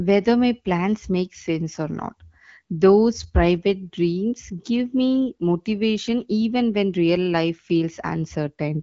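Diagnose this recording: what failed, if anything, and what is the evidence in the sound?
Nothing failed; the speech carries no audible fault.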